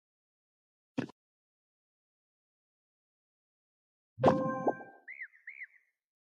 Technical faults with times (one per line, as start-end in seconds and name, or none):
none